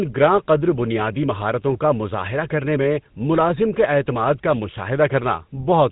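Buzzy, gravelly roughness runs through the whole of this speech recording, with nothing audible above 4 kHz. It is the sound of the GSM full-rate codec, which rebuilds the voice from a vocal-tract model driven by sparse regular pulses, and the plainly audible damage fits its 13 kbps rate.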